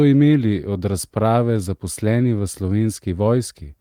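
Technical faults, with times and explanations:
No technical faults are audible anywhere in this speech recording.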